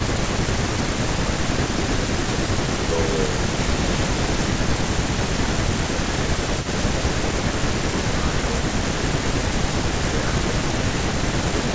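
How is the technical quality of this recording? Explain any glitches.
The recording has two problems from a speakerphone call: a delayed echo over the first part, and brief dips in the voice when both sides speak at once. The band stops at 8 kHz, which fits a wideband call codec such as G.722.

Echo leak, from 0.0 to 7.6 s: a second copy of the voice trails the original by about 464 ms, sitting roughly 10 dB below it. This is likely because the far end played the call over a loudspeaker and its echo canceller failed to remove all of what its microphone picked up, so that residue travelled back. The result is a faint repeat just under the main voice.

Speech suppressed in double talk, at 0.0–0.3 s, 1.27–2.03 s, 4.54–7.05 s and 8.22–8.47 s: the voice dips by about 5 dB in short patches, adding up to roughly a second within the long 4.54–7.05 s stretch and well under that in the others. The likely cause is the echo canceller meeting simultaneous talk, failing to tell its own talker from the loudspeaker echo, and turning everything down. 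The voice briefly sounds pulled back.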